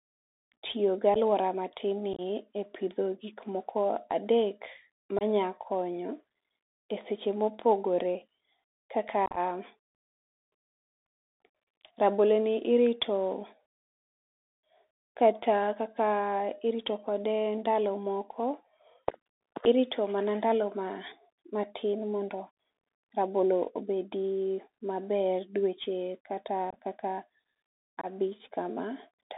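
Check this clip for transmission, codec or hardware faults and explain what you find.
Two faults are present: a narrowband Bluetooth CVSD headset codec on the whole recording, and six bursts of unconcealed Bluetooth headset packet loss.

Bluetooth CVSD headset codec, throughout: the speech is carried as one bit per sample at 64 kbps, with an adapting step size, and the line passes only about 250 Hz to 3.7 kHz. The result is thin, muffled speech, scratchy sibilants, overload distortion on loud high sounds, and a granular hiss underneath.

Unconcealed Bluetooth headset packet loss, at 1.14–1.17 s just before "aluora ma tin", 2.13–2.21 s just after "gi aluora ma tin", 5.19–5.23 s, 9.26–9.38 s, 26.70–26.77 s after "dweche kata", and 28.01–28.06 s. Short voice packets between headset and phone went missing and were replaced by silence, with no concealment. The single 11 ms and 22 ms losses sound like abrupt dropouts. 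The longer episodes, up to 75 ms lost across about 105 ms around 9.3 s, scatter roughly ten to twenty missing packets, so those moments sound crackly and chopped. After each hole the speech briefly returns quieter while the CVSD step size rebuilds.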